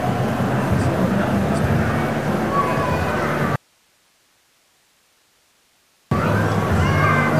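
The sound has an audio dropout to a faint residue from 3.56 to 6.11 s. It cuts abruptly to hiss roughly 40 dB down, likely a signal loss lasting about 2.6 s with the path left live. The waveform collapses to a thin band, and the spectrogram shows faint broadband noise.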